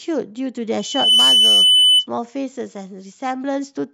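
From 0.79 to 2.07 s, a loudspeaker feedback squeal: a microphone-to-speaker loop runs away at 3 kHz, one tone swelling up to about 10 dB above the speech, where a steady interfering tone would not grow.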